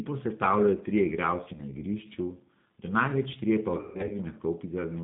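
G.729 codec, throughout: the speech is rebuilt at 8 kbit/s from a vocal tract filter and pitch predictor, so it sounds plainly rough and synthetic, with nothing above 4 kHz.

Packet loss concealed by the speech codec, from 1.54 to 1.62 s: a 20 ms gap, consistent with one lost packet, is filled by extrapolating the last pitch and filter. This leaves a brief buzzy or noisy smear before the voice recovers.

Packet loss concealed by the speech codec, from 3.77 to 4.16 s: about 220 ms goes missing in bursts scattered over 320 ms, with the longest run lasting 140 ms. The decoder stretches the sound into a fading buzzy tone or coloured noise, and the voice stays weak or distorted until about 4.16 s.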